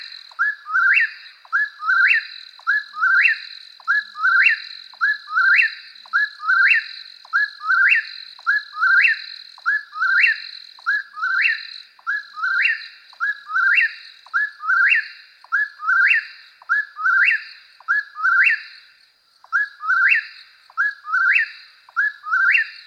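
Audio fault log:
1.23–1.37 s, lost LE Audio frames: about 82.5 ms of audio drops out in short gaps scattered over 135 ms, the longest around 20 ms. The LC3 decoder fills each gap by repeating the last spectrum with random signs, so tonal content briefly smears into a rough, noisy texture. This gap pattern fits 7.5 ms frames.
10.98–11.01 s, lost LE Audio frames: a single 22.5 ms gap concealed the same way gives a brief noisy blur.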